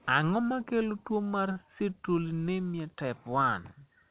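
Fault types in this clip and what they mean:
Short stall from a late packet: a packet reached the receiver after its playout time, so the jitter buffer ran dry and the decoder had to stretch the last bit of speech for about 37 ms, around 1.52 to 1.58 s. Nothing is lost, and playback resumes from the same point, now 37 ms later. The sound is briefly held too long, with a slight buzz or dip, within band-limited audio that carries nothing above 4 kHz.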